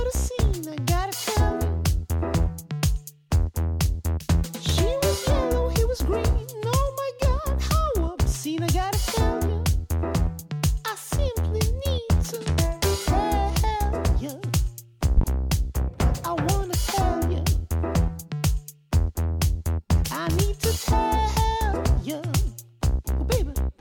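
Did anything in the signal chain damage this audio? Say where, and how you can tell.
Yes. A loud pop, really two sharp pops close together, runs from 15.17 to 15.25 s, well above the surrounding sound. The sound carries on underneath. A sudden voltage step in the analogue wiring, from a plug, switch or static, is the likely stage.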